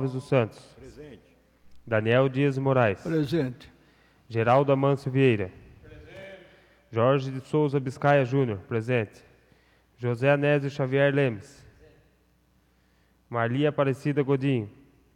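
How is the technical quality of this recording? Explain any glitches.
The technical quality of the recording is sound, with no glitches to explain.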